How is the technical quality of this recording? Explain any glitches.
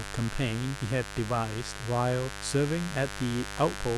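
The recording is marred by mains buzz running through the whole speech clip. Sharp electrical switching spikes from the 50 Hz supply are leaking into the signal path, stacking harmonics up into the kilohertz range, so a steady, raspy buzz sits loud beneath the speech, only around ten decibels down.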